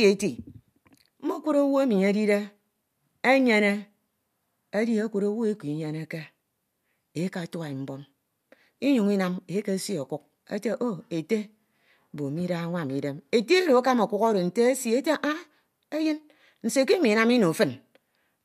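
No technical faults are audible anywhere in the speech recording.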